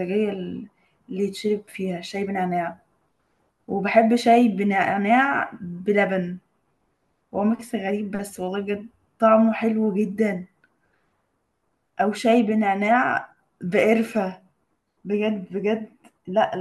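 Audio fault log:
No faults heard anywhere in this speech recording.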